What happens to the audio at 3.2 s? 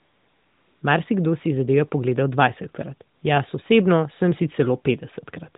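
For about 60 ms, from 3.16 to 3.22 s, the real background drops out and is replaced by a flat, steady hiss that switches in and then out again. That is AMR comfort noise: the mobile codec's voice activity detector judged this stretch silent and stopped sending speech frames, so the receiver filled the gap with synthetic noise built from a rough estimate of the background's level and spectrum, which stays inside the narrowband 4 kHz limit.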